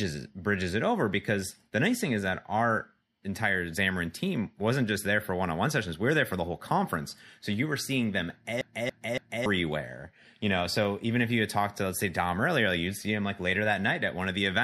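A speech clip with a CD stuck on one turn from 8.61 to 9.46 s. A scratch keeps throwing the laser back, so the same 0.28 s segment plays three times, each jump marked by a brief mute. A waveform shows identical blocks separated by tiny gaps, and a spectrogram shows repeated matching patterns with thin vertical breaks.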